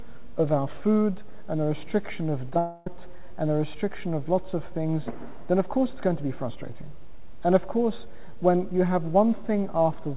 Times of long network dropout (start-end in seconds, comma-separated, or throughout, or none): 2.58-2.87